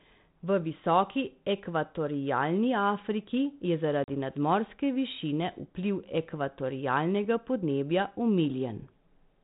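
At 4.04 s the speech drops into a hard-edged silent hole: packet loss on an ADPCM call. About 40 ms is missing, roughly two packets. The decoder's predictor loses track of the sender's. Speech comes back with slight distortion, settling by 4.15 s.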